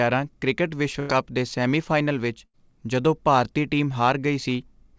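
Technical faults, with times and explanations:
1.00–1.11 s and 2.45–2.55 s, burst of packet loss: The audio stops being real just before "ਦੇ ਸੈਮੀਫਾਈਨਲ ਵਿੱਚ ਜਦੋਂ", and again between "ਦੇ ਸੈਮੀਫਾਈਨਲ ਵਿੱਚ" and "ਜਦੋਂ ਭਾਰਤੀ". Each time a run of packets never arrived in time. The receiver fills the hole by stretching the last sound and letting it fade, for about 90 ms and 80 ms. About 100 ms and 80 ms of the original are then skipped. The gap sounds like a smeared, dying tail followed by a jump forward.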